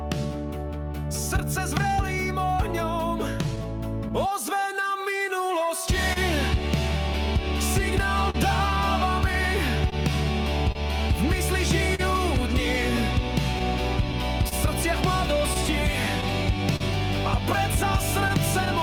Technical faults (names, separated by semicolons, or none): clock drift between sender and receiver; repeated timing corrections; scattered short gaps